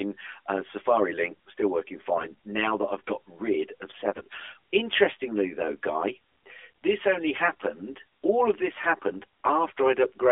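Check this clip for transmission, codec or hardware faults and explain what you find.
Two faults stand out in this speech: a comb-filter colouring across the whole recording, and two short bursts of codec bit errors.

Channel delay (comb filtering), present from start to finish: one channel runs about 10 ms behind the other, and summing them to mono cancels shared content at evenly spaced frequencies, the first near 50 Hz and then roughly every 100 Hz. Within the narrowband 300 Hz to 3.5 kHz line this leaves a dense row of fixed notches, so the voice sounds hollow and phasey throughout.

AMR bit errors at 2.14 to 2.33 s and 4.10 to 4.39 s: over these stretches, on the order of 7 percent of the less protected bits in the AMR frames arrived flipped while the core checksum still passed. The excitation pulses land in the wrong positions and the fine pitch, gain and spectral values drift. The voice keeps roughly its pitch and loudness but turns hoarse, scratchy and gargly for those moments.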